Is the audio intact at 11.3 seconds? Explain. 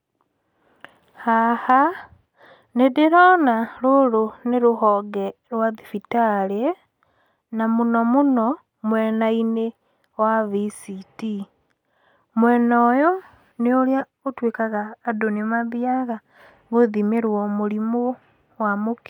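Yes, at 11.3 seconds the speech plays through intact, with no audible dropout, click, distortion or other fault at that moment.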